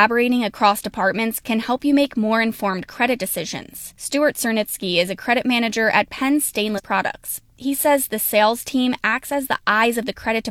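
At 6.74 to 6.80 s the speech breaks up briefly for about 66 ms, the sound of damaged data in a compressed stream. Corrupted bytes left the decoder misreading frames, losing sync and hunting for the next valid frame header before recovering.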